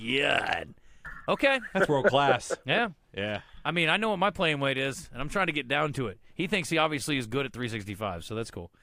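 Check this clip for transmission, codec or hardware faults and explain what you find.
No faults can be heard anywhere in this speech recording. Listening through the whole clip, nothing stands out that would need a time or an explanation.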